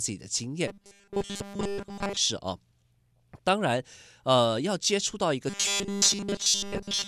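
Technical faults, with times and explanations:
0.68–2.17 s and 5.50 s to the end, robotic sound from repeated short buffers: a rigid 200 Hz metallic buzz replaces nearly all the speech, likely from a 5 ms chunk looping while new audio is late. Unlike codec warble, the pitch stays fixed.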